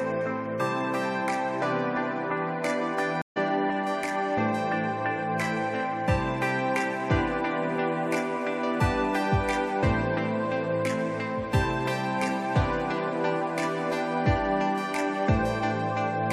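At 3.22–3.38 s a stream reconnect leaves 142 ms of silence, then resumes roughly 0.1 s ahead, a skip a plain dropout wouldn't cause.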